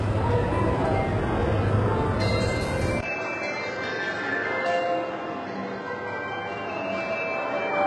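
From the start, the sounds carry a gritty, metallic treble that ends at 11.5 kHz, likely HE-AAC compression at a very low bitrate near 12 kbps. Its replicated highs don't match the lower harmonics, which sets it apart from plain low-pass dullness.

At 3.01 s, a 20 ms silence is followed by an abrupt shift to a duller, boxier tone cut off at 7.6 kHz. The level drops by about 5 dB, and a faint new noise floor appears, roughly 40 dB down. This is likely an input switched to a poorer device. Unlike codec damage, it is a sudden, lasting change of tone and noise from one moment to the next.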